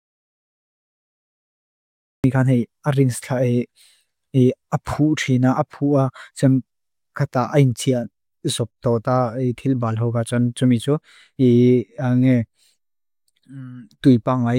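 The clip opens in dead silence, an audio dropout to silence that's already under way at 0.0 s and runs until about 2.24 s. It's plain silence, with no room tone or hiss at all, so it isn't just a quiet lead-in. The likely cause is the input dropping out, from a loose device, a failed link or an accidental mute, while the recorder kept writing silence. The speech then starts abruptly, and whatever came before it is lost.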